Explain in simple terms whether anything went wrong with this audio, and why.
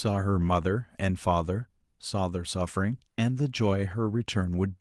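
Between 0.41 and 0.47 s, a lost packet was rebuilt from error correction. About 40 ms sounds briefly rougher and noisier, which fits two lost packets, but unlike a dropout there's no silent gap.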